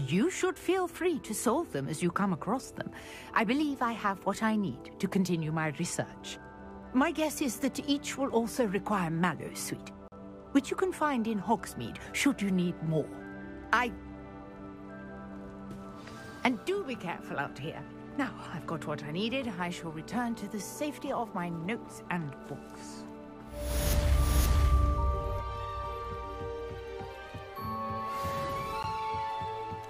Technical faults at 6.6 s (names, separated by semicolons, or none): none